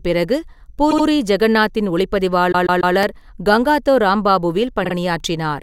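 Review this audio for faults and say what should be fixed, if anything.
Repeated frames stutter the speech at 0.90–1.05 s (a 72 ms block heard twice more), 2.51–2.94 s (144 ms, three more times) and 4.84–4.93 s (48 ms, twice more). Each block replays, adding time. Spectrograms show identical tiled slices, and waveforms show copied segments. Verify frame sequencing when writing or transmitting so no frame is duplicated.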